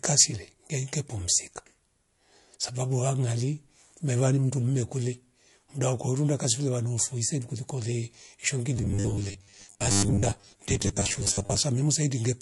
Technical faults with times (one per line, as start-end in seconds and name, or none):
0.00-12.42 MP3 compression
8.77-11.58 robotic sound from repeated short buffers